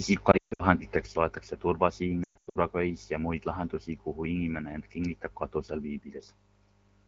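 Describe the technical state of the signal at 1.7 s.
At 1.7 s the speech is inside a span, from 1.06 s to the end, where the level falls abruptly by about 6 dB and stays down. The likely cause is one channel dropping out: with one side of the stereo pair gone, the mono sum keeps only half of what both channels shared. Unlike a simple gain drop, anything carried only by the lost channel vanishes rather than merely getting quieter. The light AMR-WB coding at 12.65 kbit/s still sounds clear here.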